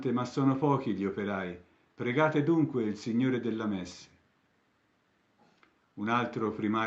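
No faults can be heard in the signal, which carries the ordinary coding texture of a call codec and tops out around 8 kHz, consistent with an Opus call path at a moderate bitrate.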